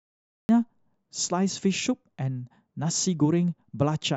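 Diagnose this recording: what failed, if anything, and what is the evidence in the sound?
The capture or stream start stage failed, producing a cut-off start. From 0.0 to 0.49 s there is pure digital silence. At 0.49 s the speech appears already under way, mid-sound, with no natural attack or fade-in leading into it. This indicates recording began late relative to the talker, so the opening portion of the utterance was never captured. What survives begins abruptly at whatever point the audio path started delivering samples.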